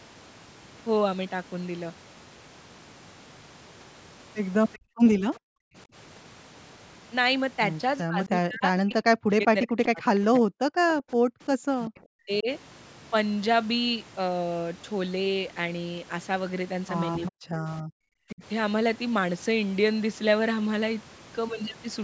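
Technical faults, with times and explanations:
4.73–4.78 s, 5.35–5.39 s and 17.26–17.31 s, echo leak: brief, faint scraps of the far side's voice come back about 386 ms late, around 25 dB below the speech in the first and last and around 35 dB below in the middle one. The likely cause is a loudspeaker whose echo canceller let some of its microphone pickup through. On a spectrogram these show as short, thin smears of speech harmonics, a faded copy of earlier energy offset by that delay.
4.78–5.75 s and 11.18–11.58 s, background gated by the echo canceller: the room tone drops out by about 40 dB, roughly 0.7 s in total in the first span and about 0.2 s in the second, then returns. The canceller clamped the microphone while its loudspeaker played. On a waveform the noise floor falls abruptly to near-flat and steps back up. On a spectrogram the broadband background, which stops at 8 kHz, goes dark in sharp-edged blocks.
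8.03–10.9 s, 11.86–12.48 s and 17.3–18.43 s, speech suppressed in double talk: the near talker dips and cuts out in pieces, by up to around 40 dB. This adds up to roughly 2 s in the first span, 0.4 s in the second and 0.5 s in the third. With both sides talking at once, the canceller likely couldn't tell this voice from the echo and turned both down. On a waveform the speech envelope is notched by sudden gaps. On a spectrogram the harmonics and upper bands vanish in patches mid-syllable.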